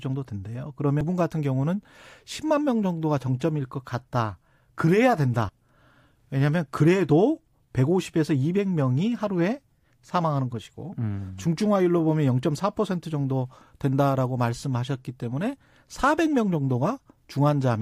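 Damaged data in a compressed stream appears at 1.01 s and again at 5.49 s in this speech. Corrupted bytes there leave the decoder unable to read those frames, so it briefly loses sync and hunts for the next valid header, producing a tiny glitch each time.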